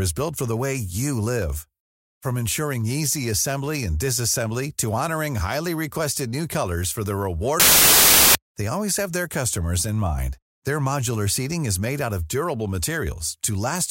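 Samples built from the wrong bytes, 7.60 to 8.35 s: misassembled byte order promotes the noisy low bits to dominance, turning the speech into loud hiss.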